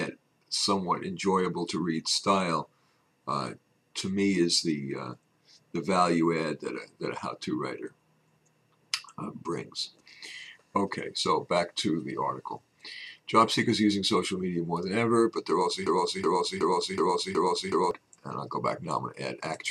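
At 15.86 s the sound catches on a fragment of about 0.37 s and repeats it exactly, back to back, six times until 17.91 s, a stuttering broken-record loop with identical attacks each pass. Whatever should have played in those two seconds never arrives. The likely cause is a stall in the player, encoder or stream, which kept resending the last fragment it held until fresh data came through.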